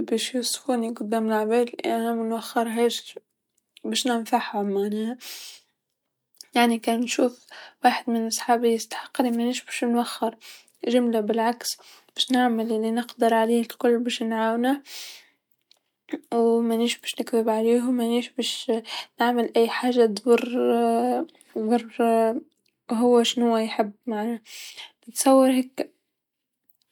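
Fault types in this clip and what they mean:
No technical faults can be heard anywhere in the speech.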